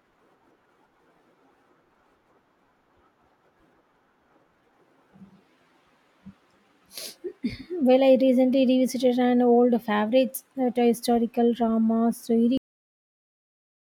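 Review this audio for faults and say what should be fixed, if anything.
Cut-off end at 12.58 s, right after "that a historical drama": the speech stops mid-sound and drops straight to digital silence with no natural decay, because the final buffers were never written out. The silence holds to the end of the file. Flush and finalise all pending buffers before closing the recording.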